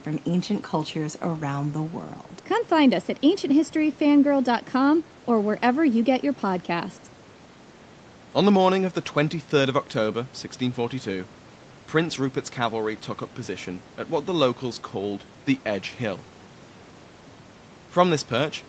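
Nothing stood out on listening to this speech, which carries the narrower band of a call, with nothing above about 8 kHz.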